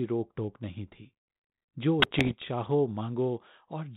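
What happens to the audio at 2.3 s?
At 2.3 s the audio is near the end of a burst of bit errors on an ADPCM link running from 2.0 to 2.35 s. Flipped bits, at a rate of roughly one in a hundred, throw off the decoder's step size and predictor, so each error rings on for a few milliseconds as pops, rough gritty bursts and brief jumps in level. Packet loss leaves gaps or smoothed fills instead. Here the sound stays continuous but corrupted, within the telephone band of this 32 kbit/s G.726 link.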